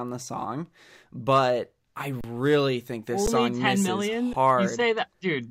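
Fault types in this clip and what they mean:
Underrun with held sample: the speech stops, the waveform freezing on one flat value, three times for 10–32 ms.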